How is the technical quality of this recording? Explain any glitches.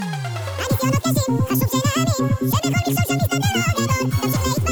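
The whole recording plays at double speed and an octave too high: every sound is rushed and shrill from start to finish. This is a wrong sample rate fault. The samples are being played at twice the rate they were captured at, with no conversion, which fits audio made at 24 kHz played back at 48 kHz. Speed and pitch rise together by that same factor of two, a shift of 12 semitones.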